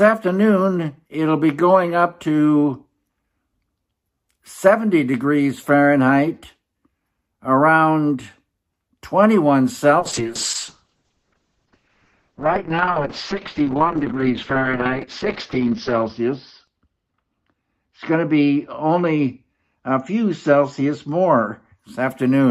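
Around 10.0 s the audio hits a call bitrate drop: the encoder gets starved, going from what sounds like roughly 48 kbps down to about 6, so it codes coarsely and loses everything above 6 kHz. It turns rough and muffled, bottoming out for about 5.5 s, until 21.85 s.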